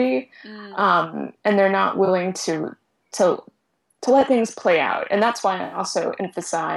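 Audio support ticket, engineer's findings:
AAC frame loss with concealment, 2.05–2.08 s: brief smeared, noisy patch about 21 ms long, consistent with one lost AAC frame. Decoder fills from last good spectrum with scrambled signs or interpolated energy, giving a phasey blur in place of the missing sound.

AAC frame loss with concealment, 5.64–5.78 s: longer gap of about 85 ms, consistent with four consecutive lost frames. Probable component: transport or packetizer upstream of the decoder.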